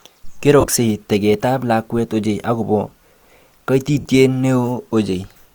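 A speech clip with two bursts of lost LE Audio frames. From 0.60 to 0.68 s, about 60 ms of audio is lost, scattered over 75 ms with the longest gap around 30 ms, just before "teket ab lakwet ochei". From 4.00 to 4.05 s, 45 ms goes missing. Both gaps fit 7.5 ms LC3 frames. The decoder refills them with a noisy, faded smear of the last spectrum, which is what separates this from a hard dropout to silence or a click.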